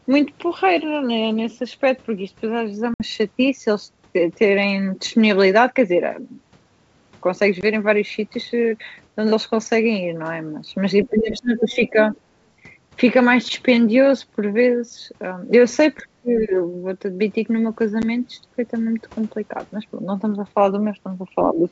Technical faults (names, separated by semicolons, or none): packet loss on an ADPCM call; other side's voice leaking through; speech suppressed in double talk